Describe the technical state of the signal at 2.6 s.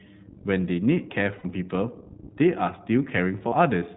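iLBC codec coding is present at 2.6 s and throughout: 20 ms frames coded independently, consistent with its 15.2 kbps mode, cut everything above 4 kHz and leave speech plainly rough and synthetic.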